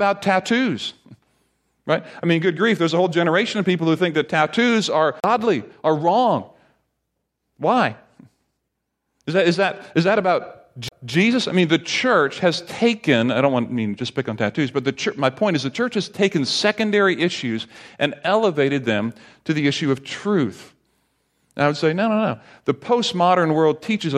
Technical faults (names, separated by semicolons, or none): CD skip